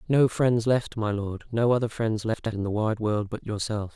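Chunks out of order at 2.34–2.52 s: a 60 ms chunk plays two chunks late, so three hard joins jumble the speech.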